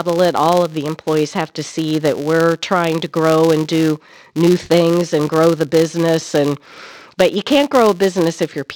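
Speech throughout, with a steady 200 Hz buzz from a filter restarted on every block. Each 5 ms block begins from silence, so small clicks track the speech level.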